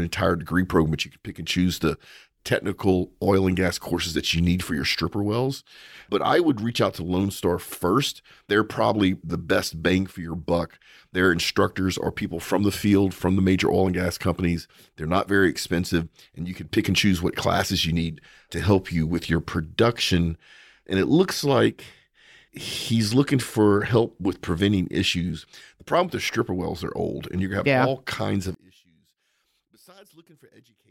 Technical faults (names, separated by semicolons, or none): one channel inverted